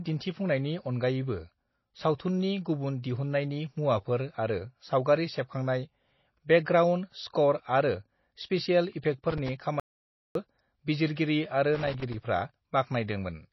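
Throughout the speech, the audio carries MP3 compression damage, and it is plainly audible. Nothing is present above 5.8 kHz, the fixed treble cut-off that an encoder applies when it is short of bits. The starved bit budget points to a rate around 24 kbps. The encoder then drops weak frequency lines from frame to frame, so they flicker in and out. That gives the watery, swirling texture, chirpy sibilants and smeared onsets. The likely cause is a low-bitrate MP3 encode somewhere in the chain.

From 9.30 to 9.49 s there is a burst of loose connector crackle. A contact in the signal path is making and breaking as it shifts, chopping the signal on and off. The result is an irregular scratchy crackle for about 0.19 s. It has no steady rhythm, which separates it from clock or buffer faults. It recurs from 11.75 to 12.14 s, this time lasting about 0.39 s with the same scratchy, broken character.

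Between those two bursts, from 9.80 to 10.35 s, is an audio dropout to silence. The speech cuts off mid-flow and returns about 0.55 s later. The gap in between is dead silence with no room tone, so the recorder kept writing samples while its input carried nothing. Whatever was spoken in that half second is gone. The likely cause is a lost input, such as a disconnected device, a failed link or a mute.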